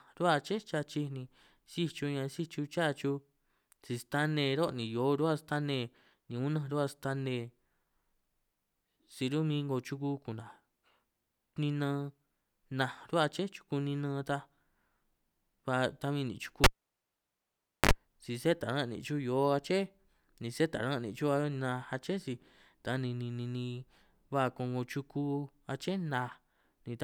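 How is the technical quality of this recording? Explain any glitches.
The recording has one glitch. At 16.64 s a cable is pulled and plugged in. A pop cuts the speech, then near silence lasts about 1.23 s. While the plug is going back in, only its tip touches, and this lets through about 53 ms of 50 Hz mains buzz. A second pop at 17.92 s brings the sound back just before "si sé taran' nìn'".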